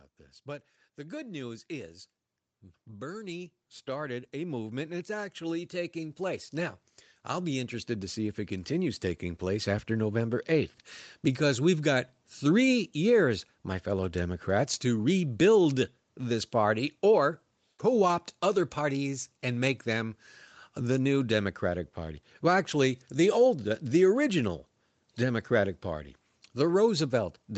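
From 0.43 s to 9.83 s, the level climbs steadily. This is automatic gain rising. The gain control judged the input too quiet and kept pushing its gain up, by about 16 dB in total. It happens slowly, over more than nine seconds. The speech and the background noise swell together, so the noise floor rises along with the speech. Across the clip, nothing sounds above 8 kHz, which fits a call codec limited to that bandwidth.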